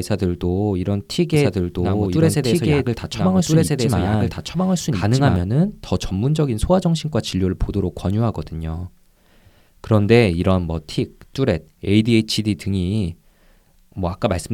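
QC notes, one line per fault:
1.34–5.36 s, doubled audio track: a second, slower capture path likely mixed the same speech in again, so a full-band copy about as loud as the original trails it by roughly one and a half seconds, dry, with no decay or room colour, and cutting in and out abruptly.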